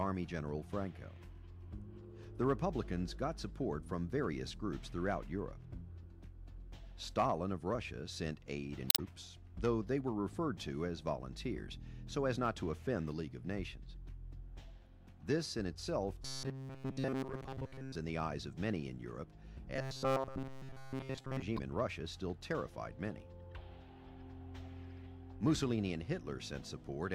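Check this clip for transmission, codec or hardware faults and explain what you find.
One fault appears twice: robotic sound from repeated short buffers, from 16.24 to 17.95 s and again from 19.76 to 21.42 s. The cause is likely a stalled audio feed, so a segment of about 7.5 ms is replayed in place of missing audio. That imposes a fixed 133 Hz buzz, rigid and metallic, tracking the original only loosely. In the first stretch most of the audio is repeated, and in the second it is repeated throughout.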